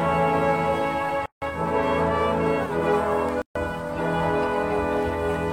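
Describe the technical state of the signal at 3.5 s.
At 3.5 s you're sitting right inside a gap at a join of encoded pieces, running from 3.42 to 3.55 s. That's about 136 ms of dead air cut into otherwise continuous sound, with edges smeared by the codec. It happens because separately encoded chunks were stitched together untrimmed, so each one's leading encoder delay and padded final frame survive as silence. The sound then resumes exactly where it left off, and this kind of join recurs every 2 s.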